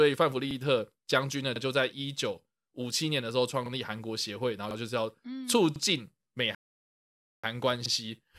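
At 0.51, 1.56, 3.66, 4.71, 5.76 and 7.86 seconds, the speech stutters briefly. These are overlapping chunks. The audio was handled in 1-second pieces. Each new piece began 50 ms before the previous one ended. So a 50 ms slice plays twice at each join. The doubled fragment sounds like a small click or hiccup. It comes back at a steady rhythm, about once a second.

From 6.55 to 7.44 seconds there is a rebuffering stall. The player ran out of buffered audio and had to wait for more. The speech drops to silence mid-flow. It then picks up exactly where it stopped. No audio is lost. The gap simply adds about 0.84 seconds to the playback.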